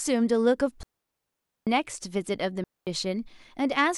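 At 0.83 s the speech drops into a clean hole of near silence lasting about 0.84 s, returning at 1.67 s, and a shorter gap of about 0.23 s follows from 2.64 to 2.87 s, with no hiss or crackle either side. These are digital wireless dropouts: the radio link lost too much data, so the receiver muted the audio with a very quick fade rather than passing corrupted sound.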